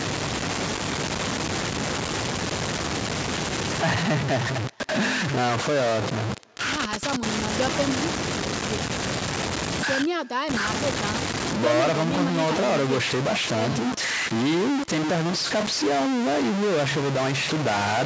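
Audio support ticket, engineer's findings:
Distortion riding on all speech, start to finish; pauses filled with hiss instead of silence. Stuck bit, likely a converter output or a data line held at a fixed value, throwing about half the samples off by one bit's weight.

Faint, thin repeat of the speech trailing it by roughly 300 ms, about 28 dB down, present throughout. Echo with no canceller: far-end loudspeaker picked up by its microphone, returned over the network round trip, with no cancellation removing it. Call microphone processing band-limits the audio at 8 kHz, as expected.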